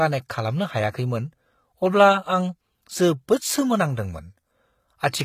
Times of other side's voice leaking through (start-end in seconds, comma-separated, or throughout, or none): none